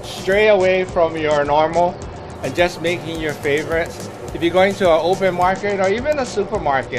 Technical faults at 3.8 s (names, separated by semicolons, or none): none